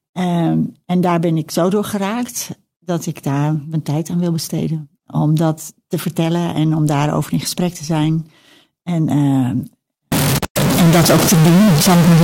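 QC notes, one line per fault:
10.12–12.24 s, stuck bit: from 10.12 s to the end, the speech turns distorted. The quiet gaps between phrases fill with a steady noise floor rather than going silent. That points to one data bit likely held at a fixed value, knocking about half the samples off by that bit's weight. Clipping would flatten only the loud peaks and leave the pauses clean. Here the fault shows even at low level.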